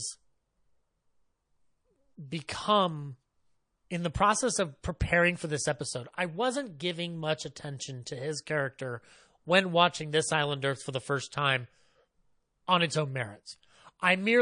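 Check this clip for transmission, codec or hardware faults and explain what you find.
The speech carries plainly audible MP3 compression damage throughout, which fits an encoder running at a low bitrate of about 40 kbps. With so few bits, the encoder drops the treble above a fixed frequency and discards quieter spectral detail that it judges inaudible, so s sounds turn watery and swirly and consonant onsets smear. On a spectrogram, the upper band ends in a hard horizontal shelf, and beneath it isolated patches flicker on and off from frame to frame.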